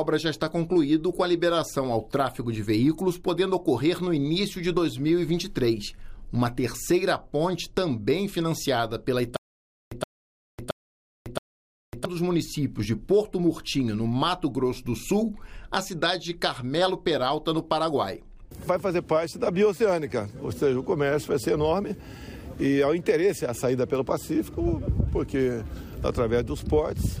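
Stutter with silent gaps from 9.37 s to 12.05 s: a 122 ms burst repeats four times, each followed by 550 ms of digital silence, a steady 672 ms cycle. The player likely stalled, replaying the last fragment at each retry, so the audio for that span is lost.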